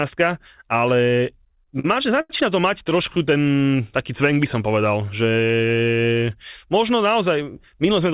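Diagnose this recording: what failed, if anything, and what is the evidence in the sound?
Repeated stalls (stutter) occur at the network and jitter-buffer stage, at 1.5–2.31 s before "to mať" and at 2.89–3.29 s after it. Late packets emptied the buffer six and five times, and the receiver stretched the last sound over gaps up to 88 ms, so the speech drags without losing anything.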